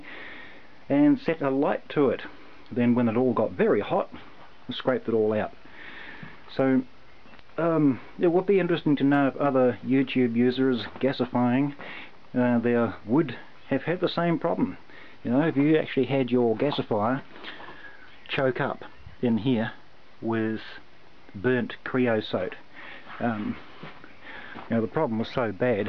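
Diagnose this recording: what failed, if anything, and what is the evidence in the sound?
Nothing in the recording stood out as a fault on listening, so there is no failed stage to point to.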